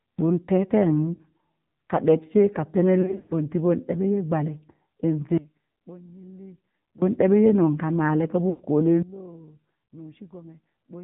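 The speech runs through the AMR narrowband mobile codec throughout. Nothing passes above 4 kHz, and the voice has the plainly audible buzzy, synthetic edge of a low-rate mode, which fits the 7.4 kbps setting.

Lost AMR speech frames appear first at 1.14 to 1.21 s. About 40 ms drops out as a short warble where the decoder repeats its last pitch and vocal-tract settings. A worse cluster follows from 3.02 to 3.34 s, with roughly 180 ms lost across 280 ms. The longest stretch of 100 ms smears and fades before the voice returns rough.

At 5.38 s a sudden gain jump drops the voice and its background together by about 22 dB. Level returns abruptly at 7.02 s, most likely from gain applied without a ramp.

At 8.50 to 8.62 s, 100 ms of frames are lost. The sound drags out and decays toward silence.

A second gain jump at 9.02 s cuts the level by about 20 dB for the rest of the clip.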